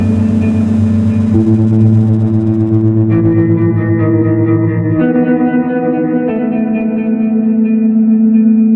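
No technical faults can be heard anywhere in this music; the signal holds steady and intact throughout, with nothing interrupting or damaging it at any point.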